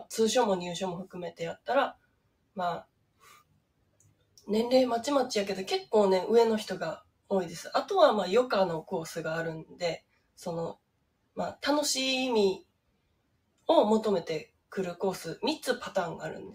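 A noise suppressor meant for speech has been left running on audio it wasn't built for. It treats sustained material as noise, so gain swings by roughly 15 dB and the waveform pumps, with tails visibly truncated. The sound is cut by the noise suppressor most heavily, by about 18 to 19 dB, at 1.07–4.45, 7.01–7.31, 9.64–10.39, 10.74–11.37, 12.62–13.68 and 14.46–14.73 s. On a spectrogram these show as darkened bands where held energy fades while transients persist.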